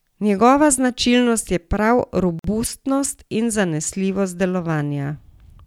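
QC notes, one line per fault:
2.39–2.44 s, gap at a join of encoded pieces: the speech drops into a 50 ms gap with smeared edges, then resumes where it stopped. Two separately encoded pieces were joined untrimmed, leaving one encoder's start delay and the other's last-frame padding.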